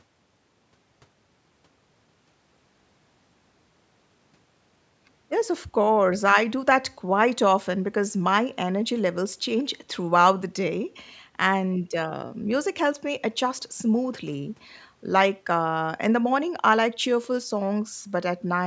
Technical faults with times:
none

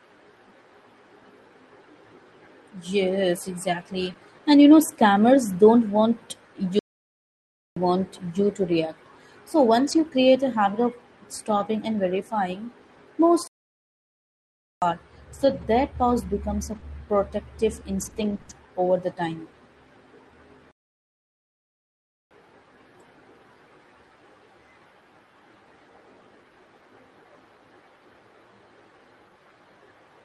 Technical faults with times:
4.09-4.11 lost packet rebuilt from error correction
4.13-4.17 short concealed packet loss
6.79-7.76 playback stall
9.87-10.01 lost packet rebuilt from error correction
11.51-11.61 lost packet rebuilt from error correction
13.47-14.82 playback stall
15.41-18.51 scattered short gaps
20.71-22.31 playback stall

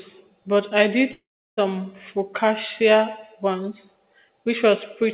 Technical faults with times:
1.12-1.59 long network dropout

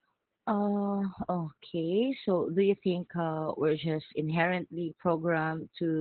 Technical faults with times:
0.00-6.01 Opus voice compression

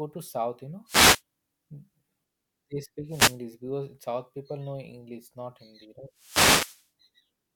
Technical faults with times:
0.86-1.22 wireless microphone noise hit
3.07-3.40 wireless microphone noise hit
6.14-6.87 wireless microphone noise hit

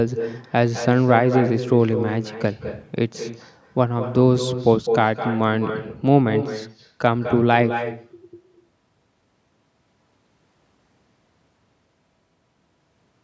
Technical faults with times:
0.00-13.23 echo with no canceller

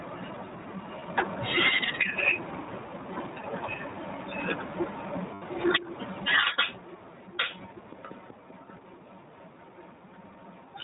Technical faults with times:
0.00-10.84 gain pumping
0.00-10.84 iLBC codec
1.00-1.03 lost iLBC frames
3.42-3.45 lost iLBC frames
5.34-5.43 lost iLBC frames

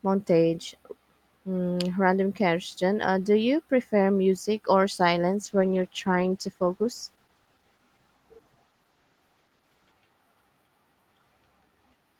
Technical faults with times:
5.45-9.99 call bitrate drop

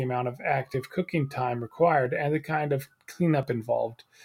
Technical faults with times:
0.74 dropped buffer (overrun)
2.06 dropped buffer (overrun)
3.43 dropped buffer (overrun)

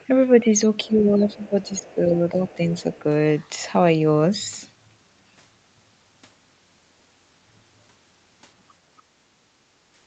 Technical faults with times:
0.00-0.05 other side's voice leaking through
0.40-0.49 speech suppressed in double talk
0.84-1.02 other side's voice leaking through
0.87-2.39 speech suppressed in double talk
1.29-1.49 other side's voice leaking through
1.78-1.95 other side's voice leaking through
2.47-3.02 other side's voice leaking through

